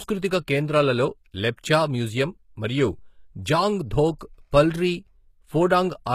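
A speech recording carries plainly audible codec damage throughout, and the texture points to HE-AAC compression, likely at a low rate around 20 kbps. The treble above the coded band is rebuilt from copied lower bands, so s sounds turn gritty and metallic rather than simply dull, and nothing sounds above about 14.9 kHz. A pre-echo occurs at 1.56 s, where a brief hiss, about 19 ms long, leads into a sharp attack and softens it. Unlike a click or dropout, this noise arrives just before the attack, smeared backward across the transform block.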